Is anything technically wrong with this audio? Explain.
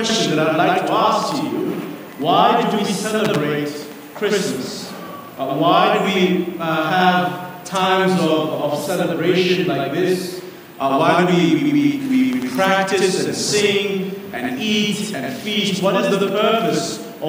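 Yes. A channel delay (doubling) fault runs through the whole clip. One channel arrives about 93 ms late, a gap that fits a 4096-sample buffer, and both channels are then summed to mono. At that spacing the two copies don't blend into one. The late copy is heard as a separate slap echo at the same level as the original, so every onset sounds doubled.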